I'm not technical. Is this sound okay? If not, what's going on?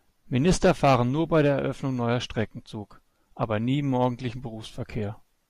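Yes, this speech recording sounds fine. There's nothing in it that points to a technical problem.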